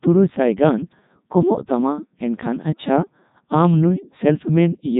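The speech has passed through the Codec 2 vocoder for its entire length. It keeps only pitch, voicing, energy and a coarse spectral envelope, then rebuilds the voice from sine waves, which fits its top 3.2 kbit/s mode. The result is heavily robotic and buzzy, with nothing above 3.8 kHz.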